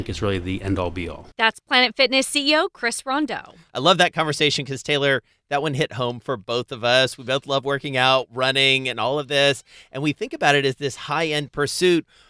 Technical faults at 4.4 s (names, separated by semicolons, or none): none